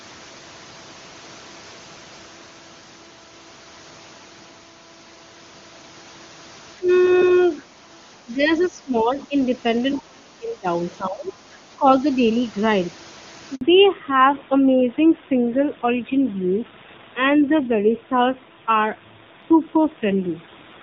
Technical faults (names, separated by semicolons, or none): speech suppressed in double talk; other side's voice leaking through; handover gap; fallback to narrowband